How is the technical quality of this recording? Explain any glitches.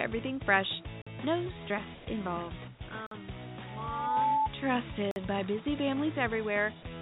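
The recording has a series of short, hard-edged interruptions and three brief patches where the background or the sound itself is replaced by smooth synthetic noise. It is band-limited throughout, with nothing above 4 kHz, which fits a narrowband telephone codec such as G.711 on a call path.

Gaps between chunks: at 1.02–1.07 s, 3.07–3.11 s and 5.11–5.16 s the audio drops into a clean hole about 48 ms long, with abrupt edges, recurring roughly every 2 s. The stream was delivered in 2-second chunks, and silence was inserted at each join, interrupting the sound without removing any of it.

Comfort noise in place of the background: from 1.95 to 2.07 s, the real background, which sits about 20 dB below the loud parts, turns into a flat, featureless hiss about 1 dB quieter for 120 ms. This is likely discontinuous transmission: the sender stopped sending during the pause, and the receiver synthesised noise shaped like the background.

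Sound dropped by the voice detector: at 2.79–2.81 s and 2.89–2.91 s, 20 ms of sound gives way to the same steady noise, losing about 10 ms and then 20 ms of real content. The sender's voice detector likely misjudged quiet sound as background and briefly stopped transmitting.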